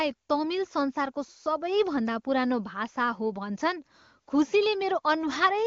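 No technical faults can be heard in the speech, which passes through the AMR wideband (HD Voice) codec at what sounds like one of its higher rates, with the audio coded up to 6.4 kHz and the band above filled in as the codec normally does.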